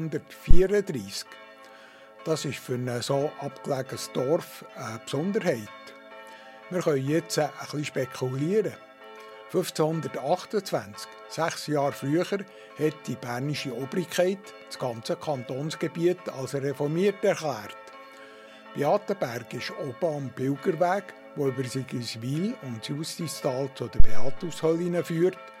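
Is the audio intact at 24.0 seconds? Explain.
No. A phantom power thump runs from 24.00 to 24.45 s. Switching the supply on a live input sends a voltage step through the coupling capacitors, heard as a deep thump peaking at about -3 dBFS and decaying over roughly 0.1 s.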